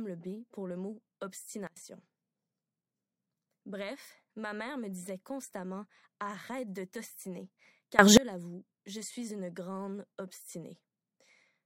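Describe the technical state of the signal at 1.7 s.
At 1.7 s the speech and its background noise drop sharply together, by about 24 dB, from 1.67 to 1.77 s, then snap back to full level. This is a sudden gain jump: for roughly a tenth of a second the level stays lowered, with abrupt edges at both ends rather than a fade. The likely cause is a digital gain setting applied instantly from one sample to the next, with no ramp to smooth the change.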